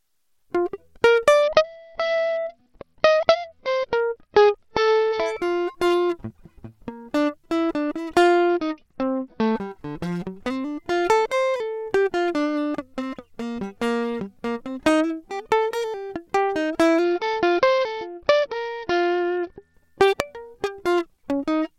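Three Bluetooth SBC bit pool drops interrupt the music, from 1.43 to 5.26 s, 8.49 to 9.55 s and 17.04 to 19.74 s. Each time the encoder appears to cut its bit allocation sharply, which fits a bit pool falling from 31 to about 8, near 66 kbps. The highest sub-bands are starved and the rest coarsely quantised, so the treble goes dull and a gritty noise rides on the music until full quality returns.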